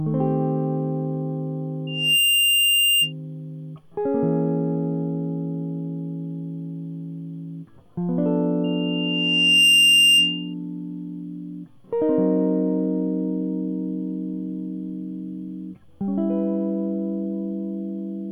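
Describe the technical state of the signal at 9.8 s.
At 9.8 s the signal is in loudspeaker feedback squeal, running from 8.64 to 10.54 s: a microphone is hearing its own loudspeaker, and at 2.8 kHz the loop gain tops unity. That tone swells over roughly a second into a piercing whistle about 10 dB above the music.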